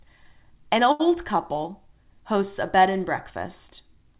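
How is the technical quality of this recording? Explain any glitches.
The speech has one glitch, heard over a narrowband call path whose G.711 A-law coding leaves nothing above 4 kHz.

From 0.92 to 1.01 s there is a short stall from a late packet. The jitter buffer ran dry, so the receiver stretched the last sound for about 74 ms until the packet arrived. Nothing is lost, but the sound holds unnaturally with a faint buzz or dip, and everything after lands 74 ms late. On a spectrogram it appears as flat, repeated horizontal bands. The waveform shows a short run of near-identical cycles.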